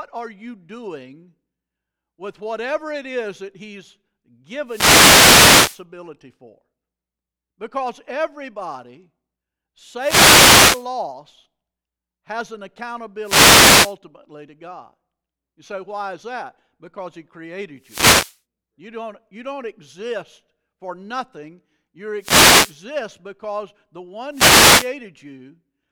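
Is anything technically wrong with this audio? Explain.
Yes. Wireless microphone noise hits occur at 4.65–5.83, 9.97–10.88, 13.22–13.96, 17.80–18.39, 22.18–22.78 and 24.31–24.92 s. The FM radio link fades as reflected paths cancel, so receiver hiss swells into brief static bursts over the speech, showing as broadband vertical smears on a spectrogram and noisy, ragged stretches on the waveform.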